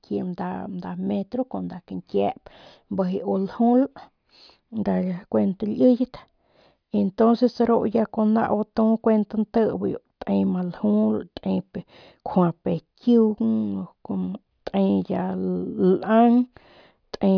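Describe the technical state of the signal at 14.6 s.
At 14.6 s the speech signal is intact, with no audible technical fault at that moment.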